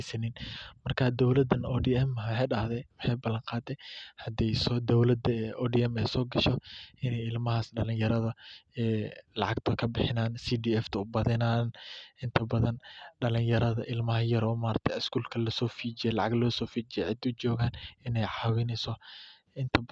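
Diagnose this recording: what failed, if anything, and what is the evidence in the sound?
Nothing in this speech recording stood out as a failure on listening, at any stage of the chain.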